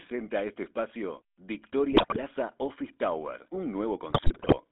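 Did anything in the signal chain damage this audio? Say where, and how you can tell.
Yes. The codec stage: GSM full-rate coding throughout, with a buzzy, gravelly roughness and a band of 250 Hz to 3.6 kHz, consistent with coarse pulse-excited vocal-tract modelling.

Network stage: GSM bit errors from 1.92 to 2.19 s and from 4.10 to 4.56 s. Corrupted filter, pitch and gain parameters produce squawks, pops and gargling over several consecutive frames.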